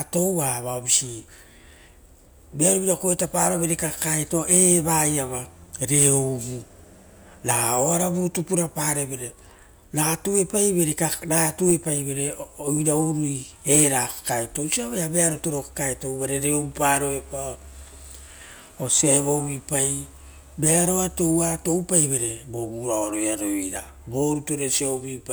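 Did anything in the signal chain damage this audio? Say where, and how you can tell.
No, nothing in the signal chain stood out as damaging this speech on listening.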